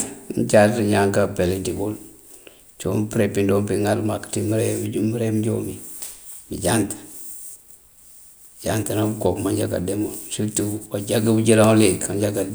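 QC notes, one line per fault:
No faults heard in playback.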